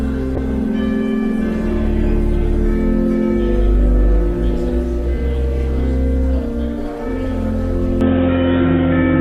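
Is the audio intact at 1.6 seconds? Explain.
No. At 1.6 s the audio sits inside a call bitrate drop running from 0.37 to 5.73 s. The encoder's budget fell from 64 to 23 kbps, bottoming out for about 3.5 s, so coarser coding leaves the sound rough, watery and duller in the highs.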